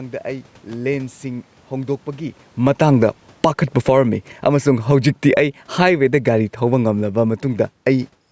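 A speech recording with a loud pop from 0.73 to 0.75 s: a single sharp thump, peaking a few decibels above the speech, laid over the sound while the speech carries on beneath it. This is likely a voltage transient from a switch, connector, static discharge or driver glitch entering the signal chain. Separately, the automatic gain falling recurs three times as the gain control judges the input too hot or its background noise too strong and pulls its gain down gradually, so speech and background sink together: by about 10 dB from 2.51 to 4.66 s, about 6 dB from 5.22 to 6.01 s, and about 3 dB from 6.58 to 8.17 s. The level shift near 2 s, where the talker moves relative to the microphone, is a separate acoustic change, not a gain-control effect.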